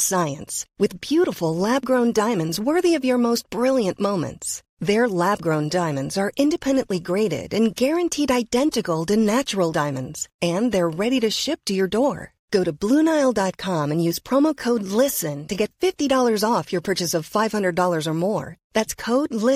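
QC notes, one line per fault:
No fault to note in this speech clip.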